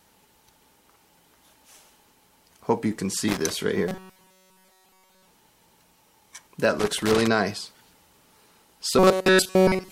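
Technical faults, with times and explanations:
3.28–3.50 s: loose connector crackle. A worn or dirty contact making and breaking rapidly chops the signal, producing an irregular burst of scratchy crackle.
3.88–5.28 s: robotic sound from repeated short buffers. The sound becomes a rigid, metallic buzz at 188 Hz, likely from a roughly 5.3 ms fragment being repeated in place of essentially all new audio.
6.79–7.27 s: loose connector crackle. A longer burst of the same irregular crackle, as the intermittent contact repeatedly cuts and restores the signal.
8.99–9.92 s: robotic sound from repeated short buffers. The same 188 Hz metallic buzz returns, likely with the repeated fragment's length fixing that pitch.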